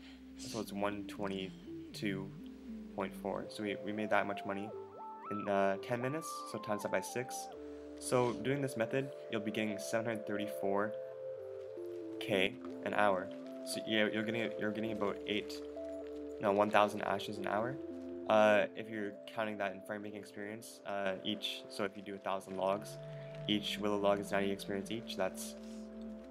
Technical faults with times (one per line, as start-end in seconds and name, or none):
12.47-12.65 one channel drops out
18.66-21.06 one channel drops out
21.87-22.51 one channel drops out